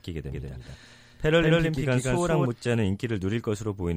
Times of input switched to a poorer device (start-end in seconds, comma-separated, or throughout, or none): none